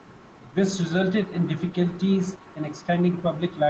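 Nothing in this speech recording stood out as a technical fault on listening.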